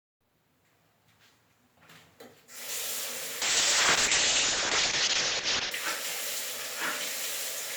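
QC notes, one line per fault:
3.43–5.77 s, call bitrate drop: sound turns coarse and watery, fitting a fall to about 6 kbps; spectrogram shows everything above 8 kHz cut off until recovery.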